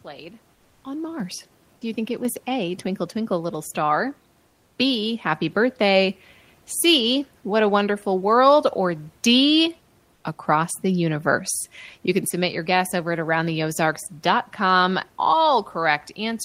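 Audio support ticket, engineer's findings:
Microphone volume stepped up at 1.2 s (about 6 dB), 2.25 s after "you think it" (about 4 dB), and 3.27 s (about 2 dB). Speech and room noise jump together, pointing to call software auto-gain raising device input.

Comfort noise in place of the background at 4.47–4.77 s (300 ms, about 3 dB quieter) and 10.15–10.23 s (80 ms, about 2 dB quieter, just before "across the universe"). Flat synthetic hiss replaces room noise, likely Opus DTX filling paused transmission.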